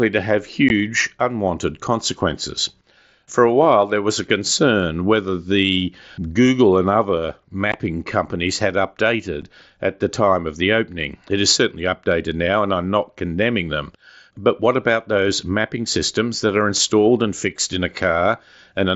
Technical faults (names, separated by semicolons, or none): unconcealed Bluetooth headset packet loss